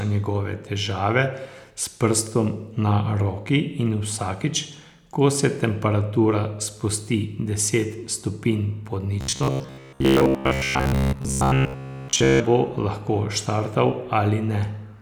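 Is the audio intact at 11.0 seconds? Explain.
No. Robotic sound from repeated short buffers covers 9.21 to 12.4 s, so 11.0 s falls inside it. Fresh audio is likely arriving too slowly, and the gaps are filled by looping the most recent fragment while most of the real speech, roughly seven tenths, is skipped. The looping imposes a fixed buzz at 66.8 Hz, which fits a fragment about 15 ms long, turning the speech into a rigid, metallic drone that only loosely tracks the talking.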